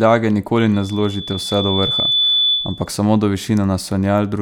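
A speech clip with loudspeaker feedback squeal from 0.74 s to 2.93 s. A microphone is picking up its own loudspeaker. At 3.5 kHz the loop gain passes one. That tone swells over about a second and a half, reaching roughly the level of the speech.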